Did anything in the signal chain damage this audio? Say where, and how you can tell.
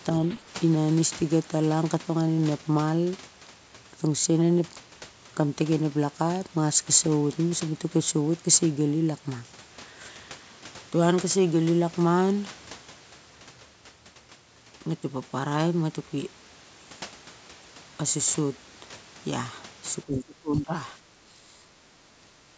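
Yes. The damage sits in the call processing stage. The speech dips sharply three times: briefly at 0.37–0.45 s by around 10 dB, then at 20.06–20.73 s and 21.13–21.77 s by roughly 20 to 25 dB, the level ducking. This is likely speech suppressed in double talk: the echo canceller mistook the local talker for loudspeaker echo while the far end spoke, and attenuated both. The missing content above 8 kHz is ordinary call microphone filtering.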